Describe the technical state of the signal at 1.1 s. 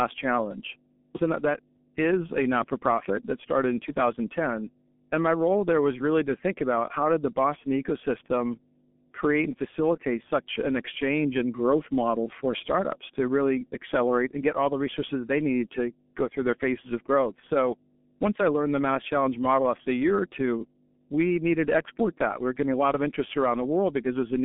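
Mains hum is present at 1.1 s, as it is across the whole recording. Power-line current is leaking into the signal path, most plausibly through a ground loop or a transformer sitting close to the wiring, and it adds a steady 50 Hz drone with a few low harmonics stacked above it. The hum sits only about 20 dB below the speech, loud enough to be heard continuously underneath it and in the pauses between phrases.

The G.723.1 codec is also audible at 1.1 s and runs through the entire clip. This low-rate telephony coder works in 30 ms frames and re-estimates its model of the voice only slowly, and the damage here is heavy. The speech is confined to a telephone band of roughly 200 Hz to 3.4 kHz, with nothing at all above 3.6 kHz, so it sounds muffled and hoarse and consonants smear together. The result fits a stream near 6.3 kbit/s.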